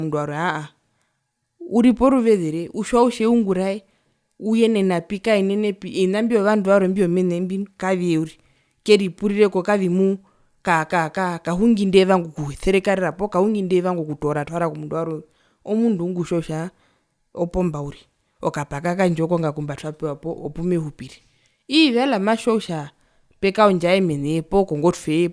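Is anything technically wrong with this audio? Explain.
No, nothing technically wrong can be heard in this speech recording. There are no faults to point to anywhere in it.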